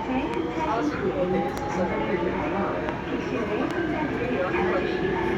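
Loud pops at 0.34–0.36 s, 1.58–1.60 s, 2.89–2.91 s and 3.71–3.73 s cut into this recording of sounds. Each is a single sharp click rising well above the surrounding sound, roughly 10 dB at the first and last and nearer 15 dB at the middle two, while the sound carries on beneath. Each pop is likely a brief voltage jolt from a plug, switch, static discharge or driver glitch, briefly shaped by the downstream circuitry.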